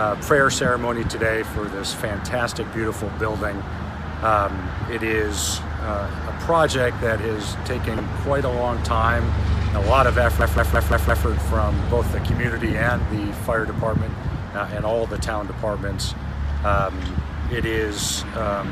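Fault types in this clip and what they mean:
Corrupt frame decoded: Around 7.97 to 8.00 s there's a quick glitch where a single compressed frame came through with damaged bits and the decoder played it anyway. The misread gains and codes throw energy into the wrong frequencies for just that frame's length, so you get a short, sharp blip or chirp peaking at about -15 dBFS.
System hang loop: From about 10.41 to 11.26 s the playback side stalls while the sound hardware keeps cycling the same chunk of buffer. A 170.67 ms slice repeats exactly, five times over, at 5.86 Hz, which fits an 8192-sample ring buffer. With a loop that long it comes across as a machine-gun stutter, not a buzz. Next to nothing of the audio seems to go missing; it just resumes afterwards.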